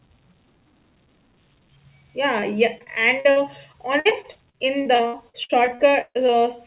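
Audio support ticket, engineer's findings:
Channel delay (comb filtering), whole clip: speech sounds hollow and phasey. One channel lags the other by a fraction of a millisecond, so the mono sum cancels evenly spaced bands, with the first notch around 1.5 kHz. Probably a stereo-to-mono downmix stage.

Repeated packet loss (robotic sound), 2.4 to 6.32 s: choppy speech with bits missing. Twenty-one gaps, the longest about 0.14 s. The jitter buffer stretches the last sound over each hole, and about a fifth of that span is patched this way. Likely the network leg of the narrowband call path, which itself cuts everything above 4 kHz.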